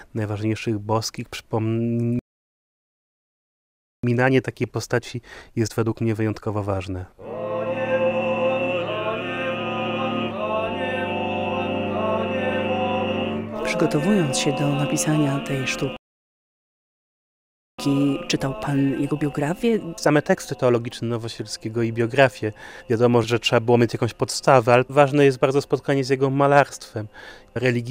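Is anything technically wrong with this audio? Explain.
Yes, there are two recurring problems.

There's a playback stall from 2.19 to 4.04 s and again from 15.97 to 17.79 s. Each time the sound cuts out mid-flow for about 1.8 s, most likely because the player ran dry of data or its thread got blocked.

Right after each gap, from 4.04 to 7.04 s and 17.79 to 20.79 s, you get time-compressed catch-up. The player trims tiny slices and cross-fades them to clear its backlog, so things run about 1.15 times fast at normal pitch.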